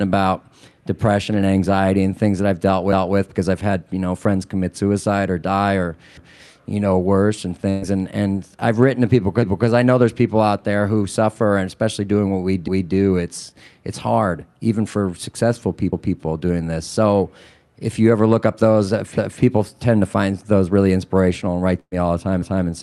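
At 6.17 s you get the first of the overlapping chunks: about 250 ms of speech plays twice, like a little stutter, because each 3 s block starts before the previous one has finished. It comes back at 12.68, 15.93, 19.18 and 22.42 s. In between, at 7.69 s, there's a burst of packet loss. About 120 ms went missing, and the receiver covered it by stretching the last sound into a fading smear before jumping ahead. The second burst, at 21.80 s, is similar but includes about 40 ms of dead silence. Underneath it all you can hear the call codec's normal coding texture, with the top end stopping around 12 kHz, which fits Opus.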